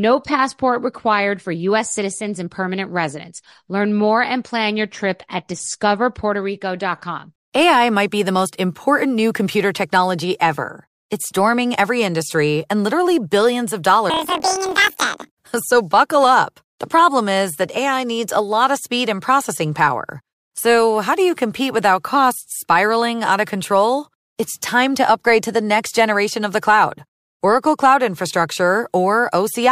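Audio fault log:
14.10–15.31 s, planar audio read as interleaved: after "and literally billions of", each 26 ms block replays twice at double speed, giving an octave-high 38 Hz robotic buzz while the pace stays normal, unlike a simple speed-up.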